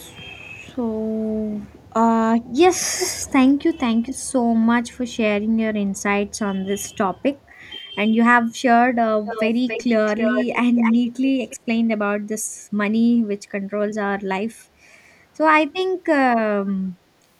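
Echo leak at 2.99 to 3.31 s, then at 9.25, 9.68, 10.06, 10.75 and 11.46 s, the last five clustered up to 11.57 s. A delayed copy of the speech returns, about 335 ms late in the first instance and about 279 ms late in the cluster. It is only slightly quieter than the speech at first and fades to faint scraps by the end. The likely cause is a far-end loudspeaker whose echo canceller let part of its microphone pickup through.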